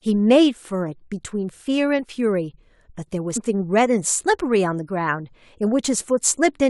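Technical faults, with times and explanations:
3.36 to 3.38 s, damaged data in a compressed stream: there's a quick glitch in the speech, only about 20 ms long. A stretch of the encoded data there got corrupted, so the decoder couldn't make sense of those frames. It lost its place and had to hunt for the next valid frame header before it could carry on. That misread stretch comes out as a short glitch rather than anything like the real signal.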